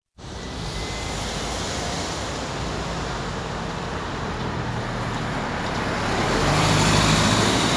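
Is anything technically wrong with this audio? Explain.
No, nothing technically wrong can be heard here.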